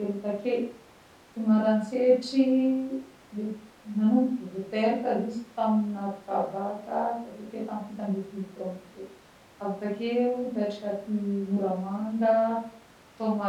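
No technical faults are audible.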